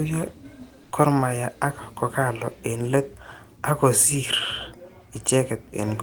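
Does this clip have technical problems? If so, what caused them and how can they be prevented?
Yes. Comfort noise in place of the background runs from 0.83 to 0.91 s, about 80 ms. The real background, sitting about 32 dB below the loudest sound, gives way to a steady, featureless hiss about 3 dB quieter. The likely cause is discontinuous transmission of the kind Opus DTX uses: the sender's voice detector judged the gap silent and stopped sending, so the receiver synthesised noise to fill it. To prevent this, disable DTX or raise the voice detector's sensitivity when recording.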